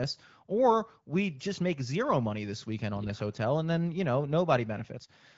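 No technical faults can be heard in the speech, which has passed through the AMR wideband (HD Voice) codec at 15.85 kbit/s, a rate at which the coding leaves only light traces on the signal.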